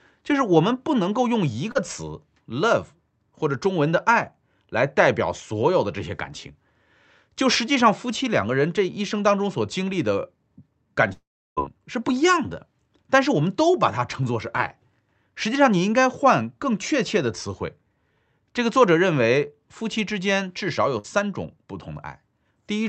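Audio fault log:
1.71 to 1.77 s, short concealed packet loss: about 40 ms lost and 34 ms filled by extending the last sound, a brief smear visible as smoothed, blurred harmonics.
11.13 to 11.59 s, long network dropout: likely a network outage; 440 ms missing, concealment fades into 330 ms of silence, a flat waveform gap and empty spectrogram band.
20.99 to 21.06 s, burst of packet loss: 60 ms missing, 52 ms bridged by a fading continuation of the last sound, seen as decaying, stretched spectral texture before audio resumes.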